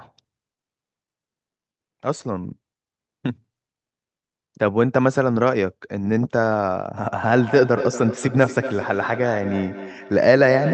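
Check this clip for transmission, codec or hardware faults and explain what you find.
One fault is present: feedback echo between two devices, running from 6.97 s to the end of the clip. Two devices on the same call share a room, so one replays what the other's microphone sent, and that microphone captures it again. Each echo canceller removes only its own playback. The speech returns at a fixed interval of about a fifth of a second, repeating and growing thinner and more ringing, peaking about 9 dB below the speech. Room reverberation would instead be a smooth, continuous decay. The sound stays band-limited at 8 kHz throughout, consistent with the call codec.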